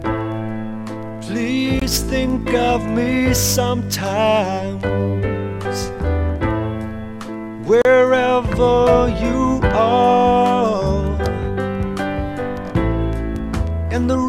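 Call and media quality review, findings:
Gap at a join of encoded pieces, 1.80–1.82 s (about 21 ms) and 7.82–7.85 s (about 34 ms), spaced 6 s apart. Separately encoded segments were joined untrimmed, leaving each segment's encoder delay and final-frame padding as silence.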